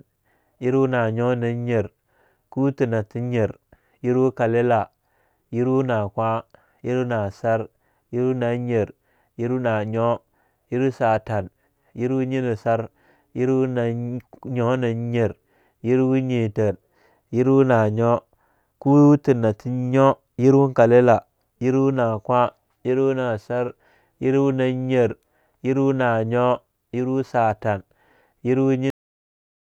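At 28.90 s the speech stops abruptly. This is a cut-off end. The final stretch of audio was never written out or played, so the recording ends partway through a sound rather than after it. There is no natural decay or trailing breath. The level falls straight to digital silence. That silence runs from 28.90 s to 29.73 s, the very end of the clip.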